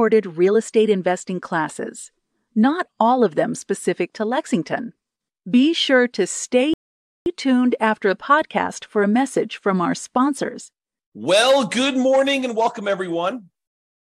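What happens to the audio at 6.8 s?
Right at that point the speech hits a rebuffering stall. From about 6.74 s to 7.26 s the playback simply runs dry: the player used up everything it had downloaded and had to wait for more data before carrying on. You hear the speech drop into dead silence for roughly half a second, about 525 ms, and then pick up exactly where it left off. Nothing gets skipped; the clip just runs that much longer.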